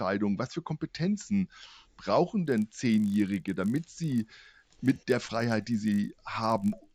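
From 2.44 s to the end, the audio carries a steady 50 Hz buzz that rides on the signal and drops away in the gaps. It is a resampler restarted on every block. The converter processed each 20 ms block in isolation. At every block edge it lacked the real neighbouring samples, so each boundary picked up a small error. Fifty such glitches per second fuse into a buzz. The pattern fits an upsampling stage from 16 kHz to 48 kHz.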